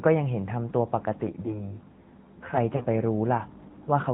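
AMR narrowband mobile codec, throughout: the speech is squeezed into a 4 kHz band and rebuilt from a vocal-tract model, sounding plainly buzzy and synthetic, which fits a rate around 10 kbps.

Channel delay comb filtering, 1.27 to 2.57 s: one channel runs roughly 10 ms late before mono summing, cutting evenly spaced notches from around 40 Hz upward, so the speech turns hollow and phasey.

Lost AMR speech frames, 2.76 to 2.85 s: the decoder repeats the last good settings at falling gain, giving a 40 ms drawn-out dip, which fits two missing 20 ms frames.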